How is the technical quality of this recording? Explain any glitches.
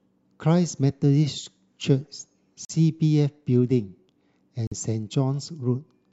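The speech has two brief gaps. At 2.65 s and 4.67 s it cuts to silence for about 46 ms, a likely Bluetooth dropout. Late packets were discarded, and the speech resumes further along rather than picking up where it stopped, which sets it apart from a buffering stall.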